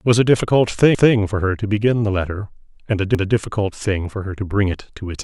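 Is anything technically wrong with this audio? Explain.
Yes, there are overlapping chunks at 0.95 to 1.15 s and 3.15 to 3.35 s. Each 2-second chunk starts 200 ms before the previous one ends, so that stretch of speech plays twice, as a stutter.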